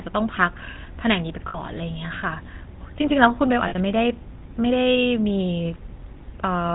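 From the start the whole clip has that GSM full-rate codec buzz: nothing above 4 kHz, gravelly pulse-driven roughness, consistent with roughly 13 kbps. Lost GSM frames hit at 1.48–1.59 s and 3.68–3.74 s, where the codec repeats the last good frame, leaving a brief metallic ring.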